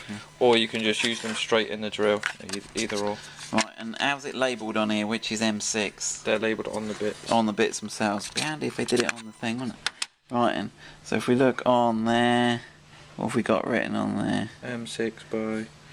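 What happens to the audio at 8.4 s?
A USB whine runs from 0.0 to 9.46 s: a steady 1 kHz tone, well below the signal, from current drawn in 1 ms bus frames leaking through power or ground.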